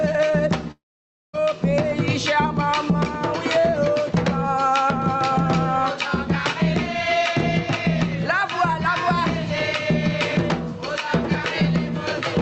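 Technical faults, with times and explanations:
Throughout, gain pumping: the background swells by roughly 10 dB in pauses and ducks under loud sounds, likely from excessive mic gain with a fast limiter clamping down.
0.71–1.35 s, long network dropout: sound smears into a fading buzz, then near-silence for about half a second, likely from lost packets, before audio resumes with that stretch missing.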